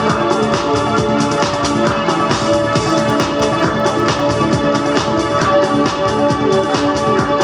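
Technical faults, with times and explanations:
2.7–4.2 s, resampler restarted on every block: each 100 ms block is converted alone, so its edges carry an error heard as ticks ten times per second.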